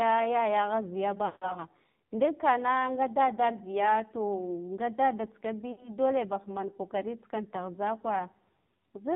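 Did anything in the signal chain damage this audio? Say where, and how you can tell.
Yes. The codec stage did most of the damage. This is AMR narrowband mobile codec audio, and the damage is heavy. The speech is buzzy and synthetic throughout. Nothing above 4 kHz survives. The coarseness points to a very low rate, around 5.9 kbps. At that rate, the vocal tract model gets only a few pulses per subframe. So the fine detail of the voice is replaced by a rough, machine-like imitation.

The network stage adds lost AMR speech frames in two places. The first run is from 1.26 to 1.55 s, with about 160 ms missing. That fits roughly eight dropped frames. There, the sound stretches out, then fades toward silence. The second is from 5.72 to 5.95 s, with about 60 ms missing. It is a shorter run. In both cases, the decoder repeated its last good pitch and vocal tract settings, with gain falling away.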